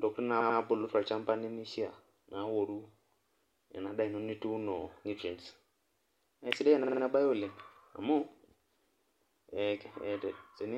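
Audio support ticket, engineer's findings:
Repeated frames, encoder output or transport: a run of compressed frames delivered more than once, so the decoder replays the same audio. At 0.40–0.58 s, a 92.9 ms block, consistent with 4 frames, plays 2 extra times, giving a stutter and adding 185.8 ms. At 6.83–7.01 s, a 46.4 ms block, consistent with 2 frames, repeats 4 extra times, giving a faster stutter and adding another 185.8 ms.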